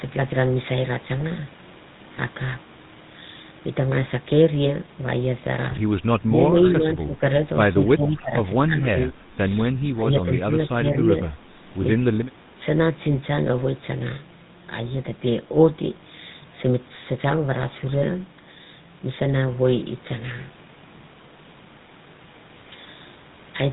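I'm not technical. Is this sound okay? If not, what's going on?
No, it has three problems.

The whole clip went through the GSM full-rate codec, an old mobile-phone system for squeezing speech. It rebuilds the voice from a simplified model instead of sending it as it is. That leaves a buzzy, gravelly roughness you can plainly hear all the way through. It also cuts off everything above about 3.8 kHz. So the voice sounds muffled and lacks crispness.

There are also short dips where the voice gets quieter or partly drops out. They come at 6.26 to 7.26 s, 7.94 to 8.39 s, 8.66 to 9.39 s, and 11.46 to 11.59 s. The middle two are the deepest. This looks like speech suppressed in double talk, likely because both people spoke at once. The phone's echo control then turned the talker down along with the other side.

Finally, there are two echo leaks. For a moment you hear a delayed copy of the voice, arriving about 0.28 s late. 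The first is faint, at 6.63 to 6.70 s. The second is very faint, at 7.87 to 7.92 s. The other person is probably using a loudspeaker. Their phone failed to remove all of its own sound from the microphone and sent some of it back.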